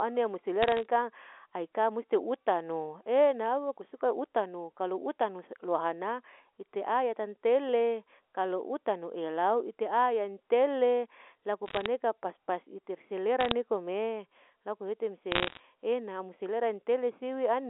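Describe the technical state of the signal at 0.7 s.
At 0.7 s the speech is hit by bit errors on a digital phone line, from 0.63 to 0.85 s. Flipped bits in the A-law line corrupt single samples, causing sharp ticks and crackle. On a waveform these are isolated spikes, and on a spectrogram thin vertical streaks cross the 300 Hz to 3.5 kHz telephone band. The error rate is roughly 0.3 percent.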